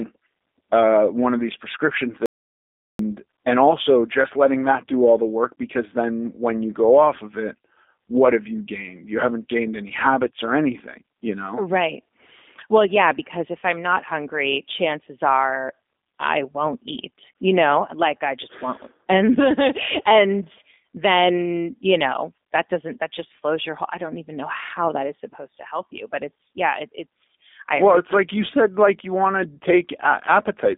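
G.729 codec throughout: speech is rebuilt at 8 kbit/s from a vocal tract filter and pitch model, giving a plainly audible rough, synthetic quality, confined to about 250 Hz to 3.6 kHz with nothing above 3.7 kHz.

Audio dropout to silence from 2.26 to 2.99 s: after "one of these prescription", the sound cuts to dead silence with no room tone for about 734 ms, then returns at "and also just letting". The input was likely lost through a disconnect, failed link or mute.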